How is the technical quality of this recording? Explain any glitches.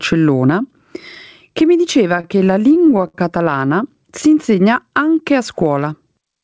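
Two faults stand out in the speech. Gain pumping runs throughout: the gain swings by roughly 15 dB, squashing the dynamics. The likely cause is gain set far too high, with a fast limiter clamping down on every peak. From 2.08 to 3.15 s come repeated stalls (stutter): sixteen short hitches, the longest 63 ms, where late packets left the receiver stretching the last sound to bridge each wait. Nothing is lost, but the delivery drags and stutters. The call's G.722 coding leaves nothing above 8 kHz.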